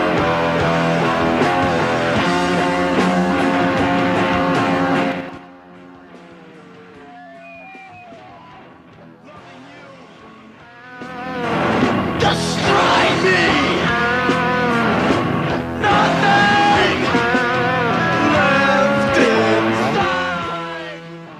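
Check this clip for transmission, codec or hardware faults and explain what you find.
Zipper noise occurs twice. From 5.04 to 5.46 s the level falls about 25 dB in 5 dB jumps, and from 10.75 to 11.61 s it rises about 25 dB in 2 dB jumps. Each jump lands unsmoothed, about ten per second, so the sound ticks. The waveform envelope looks like a staircase, and the spectrogram shows faint broadband vertical lines at each step.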